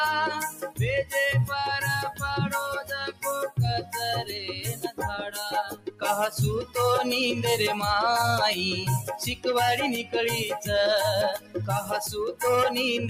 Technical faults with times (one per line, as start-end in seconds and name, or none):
0.00-13.09 noise suppressor applied to music or sounds
0.50-0.79 sound cut by the noise suppressor
3.09-3.24 sound cut by the noise suppressor
4.74-5.01 sound cut by the noise suppressor
5.67-6.03 sound cut by the noise suppressor
11.38-11.56 sound cut by the noise suppressor